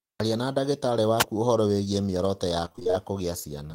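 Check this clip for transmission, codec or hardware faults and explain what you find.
Two faults are audible in the speech.

From 1.19 to 1.24 s there is a wireless microphone noise hit. The FM radio link briefly faded, probably from reflections cancelling the direct signal. Receiver noise rose over the voice, giving a brief swish of static about 50 ms long.

From 2.65 to 2.95 s there is repeated packet loss, producing a robotic sound. Several short dropouts, the longest about 22 ms, were each patched by extending the preceding audio. Concealment fills nearly half of this stretch, so the speech sounds choppy.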